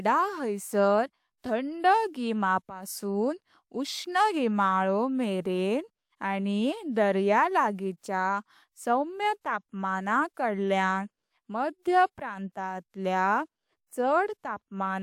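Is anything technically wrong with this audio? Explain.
No, the speech signal stays technically sound throughout, with nothing in it that points to a fault in capture, processing or playback.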